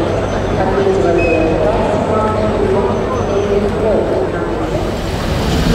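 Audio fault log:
Throughout, USB whine: a faint fixed-pitch tone at 8 kHz, roughly 40 dB below the signal, from the bus's 125-microsecond microframes leaking in through power or ground. Unlike mains hum, it is a thin high tone, not a low 50 or 60 Hz buzz.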